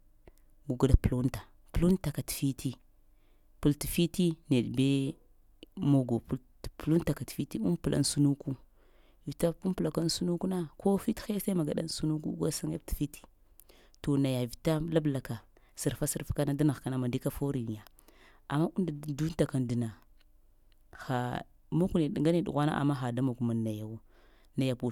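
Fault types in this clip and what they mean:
Nothing here to flag, since the speech comes across without any dropouts, glitches or other technical faults to pick out.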